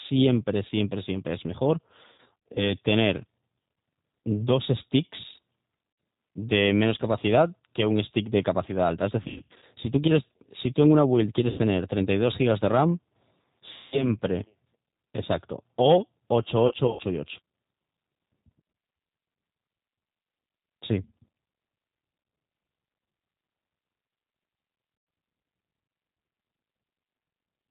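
The whole speech clip passes through the G.729 codec, plainly audible: the 8 kbit/s coder rebuilds each 10 ms frame from a vocal tract filter, pitch predictor and sparse pulses, so nothing above 4 kHz survives and the speech sounds rough and slightly synthetic.

VoIP packet loss concealed by the speech codec occurs at 2.12–2.71 s, 5.90–5.98 s, 9.22–9.65 s, 11.50–11.59 s, 13.76–14.10 s, 16.67–17.01 s and 24.97–25.07 s. Between 80 and 260 ms goes missing in each, and the decoder extends the last pitch and filter into a fading buzzy tone or coloured noise. The speech stays weak briefly after packets return.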